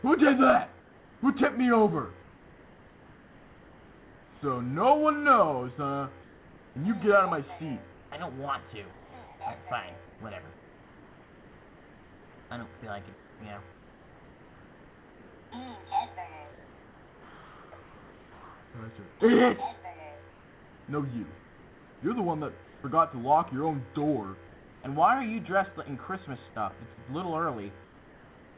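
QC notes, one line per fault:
0.80–4.42 s, 6.22–22.84 s, 24.48–24.84 s and 27.84–28.57 s: comfort noise in place of the background. In the pauses, roughly 2.6 s, 8.9 s, 0.36 s and 0.74 s in total, the real background gives way to a steady, featureless hiss, about 2 to 3 dB quieter in the last two, capped at 4 kHz like the G.711 call audio. This is likely discontinuous transmission with RFC 3389 noise filling the silence.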